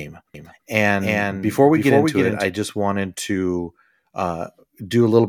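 A speech clip with a doubled audio track from 0.34 to 2.44 s, ending just before "just wanted to": a dry, full-band second copy trails by about 300 ms, about 5 dB down, cutting in and out abruptly. This is likely a duplicate capture path or misaligned edit.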